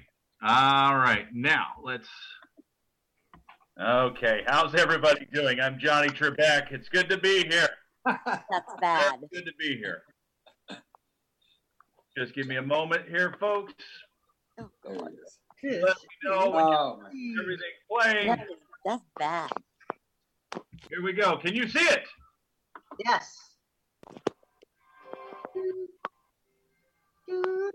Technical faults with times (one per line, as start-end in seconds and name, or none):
none